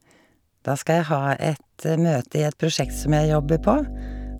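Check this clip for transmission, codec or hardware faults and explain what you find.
One hardware fault is present: mains hum enters the speech at 2.82 s and continues to the end. A ground loop or nearby transformer is leaking the 50 Hz power line into the signal path, so a steady low buzz sits under the speech, only moderately quieter than it. Unlike handling noise or low-frequency rumble, which are irregular and broadband, this tone holds one fixed pitch with some harmonics at exact multiples of 50 Hz.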